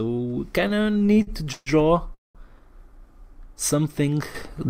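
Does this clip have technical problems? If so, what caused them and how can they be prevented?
Yes. From 0.61 to 1.69 s the audio drags and stutters: eleven short holds break up the flow, filling about 332 ms (nearly a third of that stretch), with the longest hold lasting 142 ms. Nothing is lost, but the timing is stretched. These repeated stalls (stutter) happen because packets kept arriving late or more slowly than they were played, so the jitter buffer ran dry again and again. Each time, the receiver stretched the last sound, fading it during the longer waits, until fresh data arrived. A larger adaptive jitter buffer and a more stable network path with less congestion would prevent this.

From 2.14 to 2.38 s the audio freezes. The last sound trails off, then about 180 ms of silence follows before playback resumes exactly where it stopped, adding roughly 204 ms of delay without losing any content. 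This call audio freeze was likely caused by packets held up in transit, which left the jitter buffer empty until the delayed packets arrived. Reducing network congestion and prioritising voice traffic with QoS would prevent it.

At 4.35 s the level jumps up abruptly by about 10 dB and stays raised to the end. The sound and the background noise rise together, which points to a level change rather than anything in the source. This sudden gain jump was likely a digital gain setting applied from one sample to the next with no ramp. Smoothing every gain change over a few milliseconds would prevent it.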